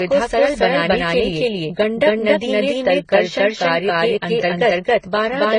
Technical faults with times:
0.00-5.59 doubled audio track
0.00-5.59 transcoding between lossy codecs

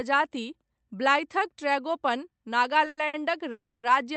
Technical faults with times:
2.88-3.15 short stall from a late packet
3.51-3.85 call audio freeze

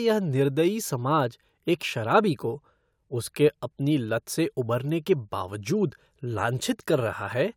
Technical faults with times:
none

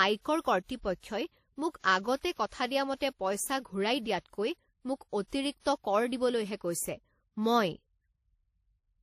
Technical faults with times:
0.00-9.03 transcoding between lossy codecs

